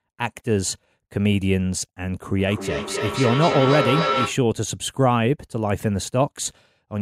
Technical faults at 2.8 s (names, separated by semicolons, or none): feedback echo between two devices